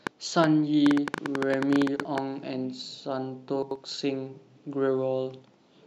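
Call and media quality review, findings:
Train of clicks, 0.07 to 2.19 s: about 20 irregular pops, roughly 8.5 per second, peaking about 15 dB above the speech. Likely interference or a faulty connection. Thin vertical broadband lines on the spectrogram.

Chunks out of order, 1.96 to 2.05 s and 3.63 to 3.76 s: 43 ms chunks played late by one and two chunks. Jumbled moments with hard joins that appear as waveform steps and spectrogram seams.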